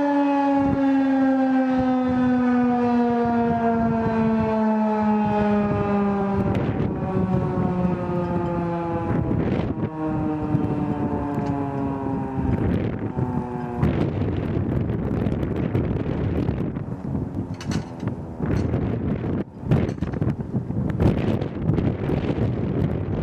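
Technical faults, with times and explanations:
6.20 s, 9.64–9.66 s, 14.93 s, 17.35 s and 21.78 s: damaged data in a compressed stream. Each is a brief chirp or blip, 14 to 20 ms long, cutting sharply into the sound. At those points the encoded data reaching the decoder was corrupted. The decoder misreads the affected frame and loses its place in the stream, producing a short burst of garbage output. It then finds the next valid frame header and resumes normal decoding.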